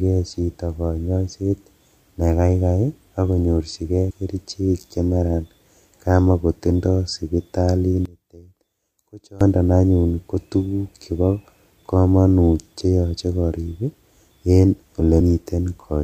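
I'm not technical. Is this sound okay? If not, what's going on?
No. There are two kinds of fault.

The first is compressed frames skipped, heard at 4.1 s and 15.2 s. The audio is stored in short chunks, and some chunks never reach playback, so the sound jumps forward. At 4.1 s, just before "kerichek chemaran", about a tenth of a second is lost. At 15.2 s a slightly shorter piece goes. The gaps match chunks of roughly 26 ms.

The second is one channel inverted, from 8.06 s to 9.41 s, starting just before "anyun kotuguk chebo komonut". Here the speech nearly disappears and what remains is much quieter. The likely cause is that one side of the stereo pair has been flipped upside down, so when the two sides are combined into one, the shared centre sound cancels itself out.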